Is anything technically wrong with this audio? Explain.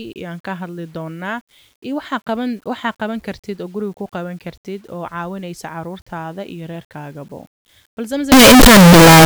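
Yes. From 8.32 s to the end of the speech clip, the sound turns into a loud, harsh distortion in which even the quietest moments are as loud as everything else. The likely cause is signed and unsigned mixed up: 8-bit samples read with the wrong sign convention, so the top bit is flipped and every zero crossing becomes a jump across the full range.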